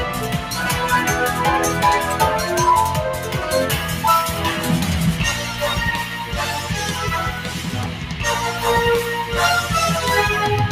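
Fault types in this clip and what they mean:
Sound cut by the noise suppressor: the noise suppressor misjudged part of the signal as background noise and applied extra gain reduction to it, pulling that stretch down harder than what surrounds it. Here it strikes between 7.88 and 8.19 s, about a third of a second in all, where the level sags by about 4 dB at its deepest, so the sound briefly dips before recovering to its previous level.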